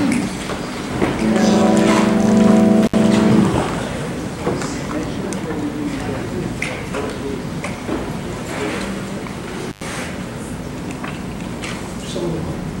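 Intermittent contact, a loose connection opening briefly, cuts the sound at 2.83 s for about 63 ms and at 9.68 s for about 100 ms. Each gap shows crackle at its edges, appearing as near-silent waveform gaps with vertical spectrogram spikes.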